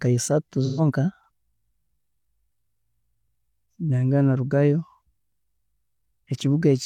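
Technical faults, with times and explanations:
0.65–0.81 s: AAC frame loss with concealment. About 128 ms of coded audio went missing, which fits three lost frames, and the decoder patched the gap from the last good spectrum. The speech there turns briefly smeared and noisy rather than dropping out.
1.24–1.28 s, 3.28–3.32 s, 5.32–5.37 s: overlapping chunks. The speech was handled in 2-second chunks, each starting 44 ms before the previous one ended. That sliver plays twice at every join, giving a short stutter every 2 seconds.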